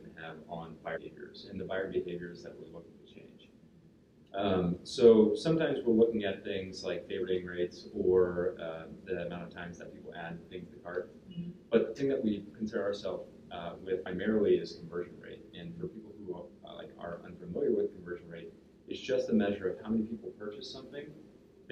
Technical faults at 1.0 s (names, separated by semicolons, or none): damaged data in a compressed stream